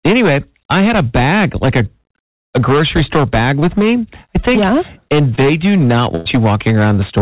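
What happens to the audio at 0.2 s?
At 0.2 s the speech is affected by hard clipping, which runs through the entire clip rather than starting there. The signal is driven about 10 dB past what the chain can pass, so roughly one sample in seven is cut off flat. Every loud syllable takes on a harsh, buzzing fuzz. On the waveform the peaks sit as flat plateaus. On the spectrogram the flattening smears harmonic energy upward, up to the call path's 4 kHz ceiling.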